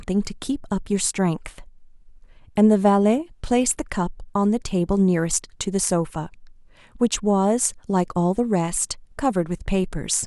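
No technical faults are audible.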